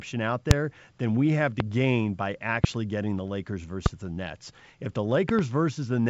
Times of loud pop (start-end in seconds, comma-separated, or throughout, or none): 0.51-0.53, 1.60-1.63, 2.64-2.67, 3.86-3.88, 5.29-5.41